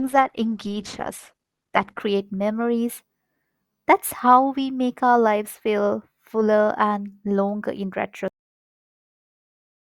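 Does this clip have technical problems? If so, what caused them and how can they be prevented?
Yes. The player opened an adaptive stream on a low-bitrate version so that playback could begin quickly, then switched to a better one once it had measured the connection. This is the adaptive stream starting at a low bitrate. From 0.0 to 2.0 s the speech has nothing above 12.2 kHz, and codec artefacts are heavier. The thin, smeared sound points to something like Opus at 16 kbit/s. At 2.0 s the quality jumps abruptly, with no gap, to a fuller sound consistent with about 64 kbit/s. Starting on a higher initial rung, or briefly pre-buffering before playback begins, would prevent this.

The second problem is a cut-off end. The final buffers were never written out or played, so at 8.28 s the speech stops partway through a sound. It falls straight into digital silence with no natural decay, and that silence continues to the end of the file. 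Flushing and draining all pending buffers before closing the stream or file would prevent this truncation.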